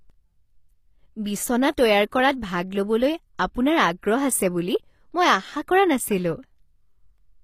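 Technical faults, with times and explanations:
Throughout, HE-AAC compression likely: the treble is rebuilt from lower bands, so sibilants sound gritty and lispy, nothing above 15.5 kHz, consistent with a low-bitrate stream around 24 kbps.
3.38 s, pre-echo: a short hiss creeps in about 12 ms ahead of a sharp attack, the codec's block noise smearing backward so the onset sounds softened.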